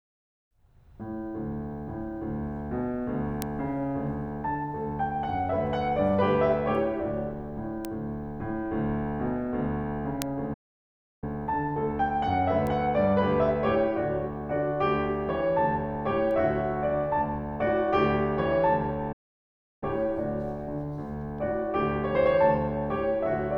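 Single flipped bits in the digital music data cause bit error spikes at 3.42, 7.85 and 10.22 s (two samples), then at 12.67 and 16.31 s. Each momentarily jumps the waveform by a power of two, giving a sharp broadband tick unrelated to the music. At 10.53 s the player likely ran out of data or was blocked, causing a playback stall. Output drops to silence for about 0.69 s until 11.24 s before the music resumes. The same stall recurs from 19.12 to 19.83 s.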